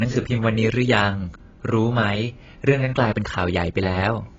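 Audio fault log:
Throughout, AAC compression: nothing reaches above 7.6 kHz, and the speech sounds dull and smeared with a warbling, fizzy edge on sibilants, likely from AAC-LC coding at a bitrate near 19 kbps. Unlike a plain low-pass filter, the band below the cut-off is heavily damaged too.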